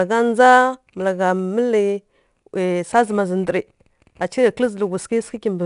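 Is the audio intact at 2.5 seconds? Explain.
No. At 2.5 seconds the speech carries 4-bit ADPCM compression, which runs through the whole clip. Each sample is coded as a small step from a predicted value with an adapting step size, so the error rises and falls with the speech: a gritty hiss riding every loud syllable, roughness on sharp onsets, and nothing above 10.6 kHz, consistent with a reduced sample rate near 22 kHz. Unlike steady background hiss, the grit tracks loudness, and it lacks the swirly, warbling texture of low-bitrate perceptual codecs.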